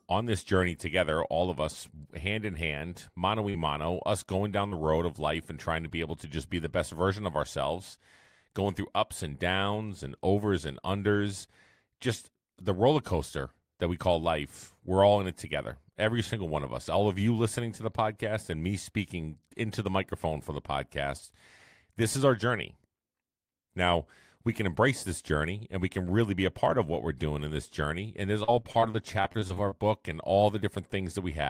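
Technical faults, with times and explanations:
3.49–3.56 s and 4.68–4.74 s, short concealed packet loss: Each is a brief smear or wobble, the first just after "hand in hand mano" and the second just after "mano us going down", with "road of life and" following it. In each, about 40 ms of the call arrived too late for the decoder. The receiver bridged the hole by extending the preceding sound, carrying voiced speech forward on its pitch and unvoiced parts as shaped noise, then crossfaded back.
28.44–29.73 s, repeated packet loss (robotic sound): The speech turns choppy for just over a second, ending right before "and all". Around a dozen holes fall in quick succession, the longest under 40 ms, and together they amount to about a fifth of the stretch. Each hole is concealed by prolonging the last sound, but the next one arrives before the speech settles. The stacked patches give the clipped texture, with fragments missing.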